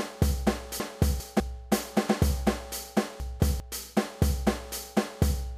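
A jumbled moment at 0.8 to 1.4 s, and another at 3.2 to 3.6 s: chunks out of order. A 200 ms chunk arrived late, playing two chunks behind its place first, then one behind, leaving hard joins.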